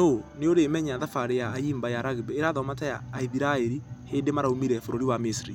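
No technical faults are audible anywhere in this speech recording.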